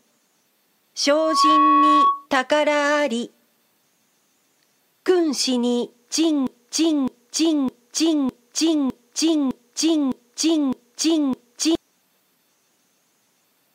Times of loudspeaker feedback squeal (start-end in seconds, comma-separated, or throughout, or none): 1.11-2.27